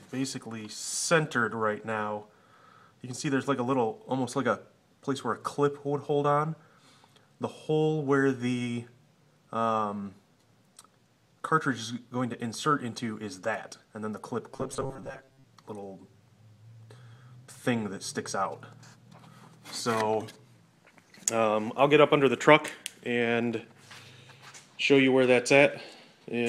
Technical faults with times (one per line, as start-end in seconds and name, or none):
14.53-15.47 robotic sound from repeated short buffers